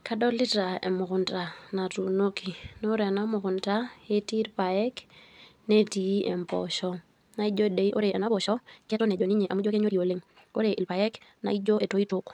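Speech, with a time-stretched section from 7.75 s to the end at 12.33 s. The pace jumps to about 1.79 times normal while pitch holds, sounding rushed. Likely cause: software shortening that part by dropping short pieces.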